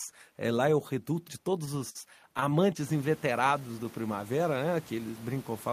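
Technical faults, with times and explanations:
1.65 to 2.53 s, repeated stalls (stutter): the audio keeps catching and hitching here. Packets were showing up late or slower than playback needed, so the jitter buffer ran dry seven times in this stretch, and each time the receiver just carried the last bit of sound on until fresh data came in, the longest wait being 54 ms. Those fills add up to 112 ms, about 13 percent of the span, yet nothing is actually lost, it just drags and stutters.
3.47 to 4.17 s, jitter buffer slow-down: this part runs at about 90 percent speed while the pitch stays put, so sounds come out stretched. The buffer needed to build up a reserve, so the receiver padded things out by repeating single pitch periods or snippets of pauses over and over, adding 75 ms in all. That repetition is what gives the stretch its drawn-out quality. The room noise you hear rising around 3 s, by about 20 dB, is just the recording space and sits about 24 dB under the speech.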